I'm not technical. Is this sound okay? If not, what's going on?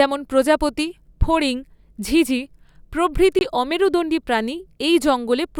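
No. At about 3.39 to 3.41 s, just before "অমেরুদণ্ডী প্রাণী", there's an underrun with held sample. The playback briefly ran out of audio and froze on its last value, so the sound cuts out for a split second. A tiny bit of speech went missing.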